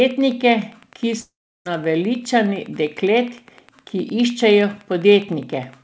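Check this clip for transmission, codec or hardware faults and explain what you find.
Two faults are present: Wi-Fi interference running through the whole speech clip, and a long network dropout early on. The call codec path itself cuts everything above 8 kHz, which fits a wideband codec such as G.722.

Wi-Fi interference is audible from start to finish as a faint, steady ticking about ten times per second, sitting well below the speech, roughly 30 dB down. The tick spacing of 102.4 ms matches a Wi-Fi beacon interval. A nearby radio's transmit bursts are being rectified by the audio circuitry, so each beacon becomes a click riding on the signal.

A long network dropout runs from 1.20 s to 1.67 s. The speech breaks off into a decaying continuation of the last sound, and this gives way to about 0.34 s of near-silence. The speech then resumes further along, with roughly 460 ms of the original never heard. 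The likely cause is a stretch of lost packets, with the receiver's concealment extrapolating the final sound and then muting once it ran out of usable data.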